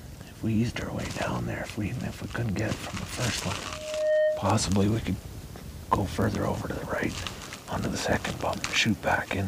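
From 3.63 to 4.67 s a loudspeaker feedback squeal rises at 616 Hz. The microphone's loop gain tops unity at that one frequency, so the tone swells over roughly half a second to sit a little above the audio. Its single steady pitch separates it from broadband hum or noise.

From 5.43 s to the end, a block size mismatch with zero padding sets in. Each block read, which fits a 1024-sample size, ends in a short silent gap, giving a 43.1 Hz buzz. Speed drops only by a factor of 0.999, so the pitch holds. The regular rate separates it from random dropouts.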